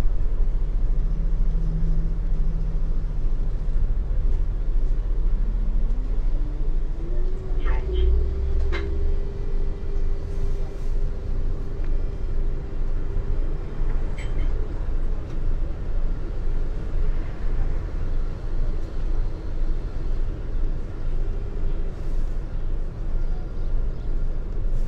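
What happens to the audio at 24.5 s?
At 24.5 s the sound continues intact, with no dropout, click or other fault at that moment.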